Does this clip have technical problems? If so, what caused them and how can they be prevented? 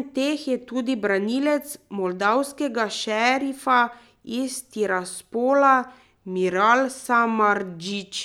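No, nothing in this speech recording stood out as a technical problem on listening, so there is nothing here that needs preventing.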